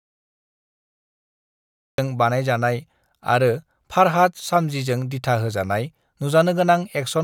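Speech clip with a cut-off start: digital silence runs to 1.98 s, then speech enters mid-sound with no attack, unlike a speaker simply beginning late.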